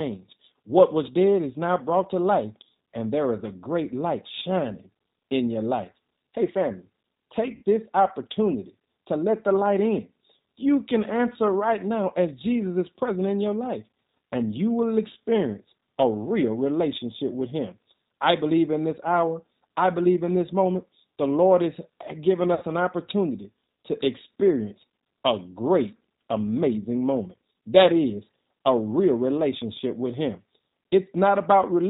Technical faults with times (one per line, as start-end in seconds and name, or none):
0.00-31.90 G.729 codec
7.55-7.63 VoIP packet loss concealed by the speech codec
22.54-22.65 VoIP packet loss concealed by the speech codec